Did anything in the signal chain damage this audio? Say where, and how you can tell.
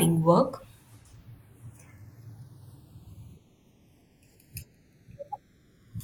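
Yes. Channels drifting apart runs throughout the speech, a converter-stage clocking fault: the left and right channels were captured by devices on separate, unlocked clocks. Their rates differ by around a hundred parts per million, so the inter-channel delay creeps steadily, reaching roughly half a millisecond by the end. When the channels combine, the resulting comb-filter notches glide slowly across the spectrum, heard as a continuous flanging sweep on the voice.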